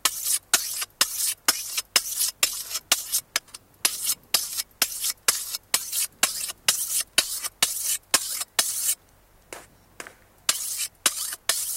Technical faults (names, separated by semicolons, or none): none